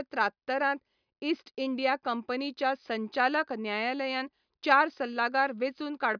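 No technical faults can be heard in this speech recording, and the signal stays steady and intact throughout.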